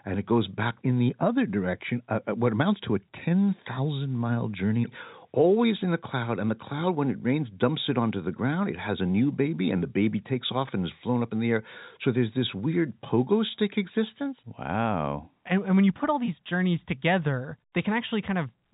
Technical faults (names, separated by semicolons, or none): none